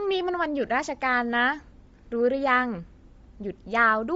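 A speech clip with a breathy, grainy edge from start to finish and nothing above about 7.7 kHz, so the top of the sound is dull while the upper range that remains carries a hiss. The damage is plainly audible and the likely cause is Bluetooth LC3 compression. The transform codec has zeroed much of the upper spectrum and filled the gaps with noise, which fits a low bitrate of around 32 kbps with 10 ms frames.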